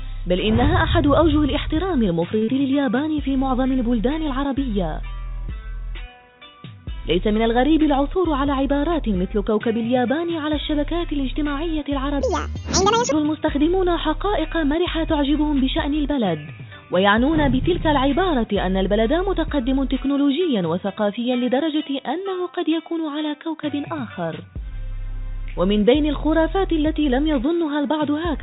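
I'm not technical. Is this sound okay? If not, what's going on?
No. There are four separate problems, all heard through a phone-style call connection that cuts off everything above about 4 kHz, which makes the sound a bit narrow and muffled.

At 2.38 s there is a short stall from a late packet. A piece of the audio arrived late, so the system held the last sound for about 37 ms until it showed up, then carried on from where it stopped. Nothing is lost. You hear a brief freeze or slight buzz, a sound held a moment too long, not a gap.

Right after it, at 2.44 s, comes a short concealed packet loss. This time about 40 ms of audio never arrived. The system invented a stand-in by continuing the previous sound and then blending back in. Unlike the stall just before it, something real is actually missing here, so you get a smear or wobble where a bit of the original is gone.

From 8.00 to 8.83 s there is a jitter buffer speed-up. 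The system had built up more stored audio than it wanted, so it quietly snipped out tiny slices, about 40 ms in total, to catch up. The sound runs about 4% faster but keeps the same pitch. It is a little faster rather than higher.

From 12.21 to 13.12 s a section is at the wrong speed. It plays about 1.82 times too fast, and the pitch jumps up by roughly ten semitones along with it. That sharp rise in pitch is what sets it apart from the speed-up at 8 s. The likely cause is that this stretch was played back against the wrong clock.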